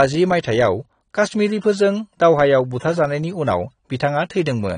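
From start to finish the speech sounds dull and smeared, with a watery, warbling texture on vowels and a fizzy edge on sibilants. On a spectrogram everything stops abruptly at 9.7 kHz, and below that the energy looks patchy, with blotchy gaps and blocky smears between frames. The likely cause is AAC compression at a low bitrate, which fits roughly 32 kbps: the encoder lowered its cut-off and quantised the remaining bands so coarsely that holes open in the spectrum.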